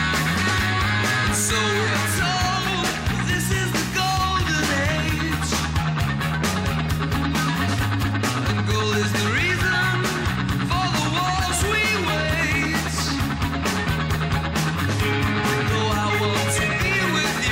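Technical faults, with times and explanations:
No technical faults can be heard anywhere in it.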